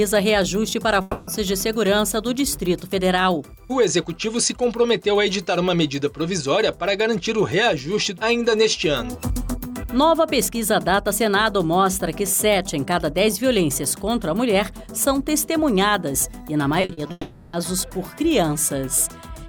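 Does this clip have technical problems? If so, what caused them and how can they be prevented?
Yes. A long network dropout is likely behind the stretches from 1.01 to 1.29 s and from 17.11 to 17.55 s. The receiver extends the last sound as a fading buzz across the missing 260 ms and 420 ms, and the second ends in a brief silence. On a spectrogram these look like smeared, repeating bands that dim away. A more stable connection with a larger jitter buffer prevents this.

Repeated packet loss (robotic sound) runs from 16.81 to 17.11 s. Four short holes, the longest 40 ms, are each patched by continuing the previous sound, covering 40% of the span. The result is choppy with pieces missing, and the waveform shows repeated segments. Forward error correction and reduced network congestion prevent this.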